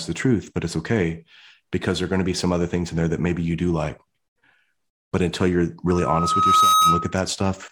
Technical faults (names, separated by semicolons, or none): loudspeaker feedback squeal